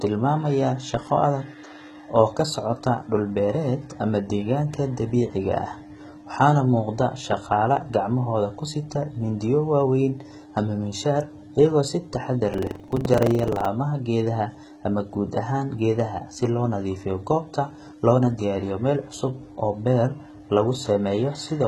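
It's a speech recording, and the whole thing has that heavy HE-AAC compression character, likely from a very low bitrate stream. The rebuilt treble sounds synthetic, so s sounds come out gritty and lispy because the replicated top doesn't line up with the real harmonics underneath. Then from 12.50 to 13.69 s, between "ama miinshaar iyagoo si" and "geedaha ama guud ahaan", there's buffer tearing: a rattly 23.4 Hz buzz where each buffer, which fits a 2048-sample size, carries a small slice of audio from about a tenth of a second earlier, hard-joined on both sides.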